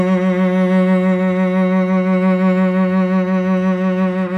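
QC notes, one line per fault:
The music signal has no audible technical faults at any point in the clip.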